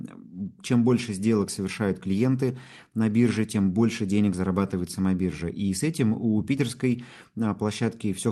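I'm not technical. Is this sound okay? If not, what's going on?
Yes, this sound is okay: it's speech carried over an ordinary online call, and nothing has gone wrong with it.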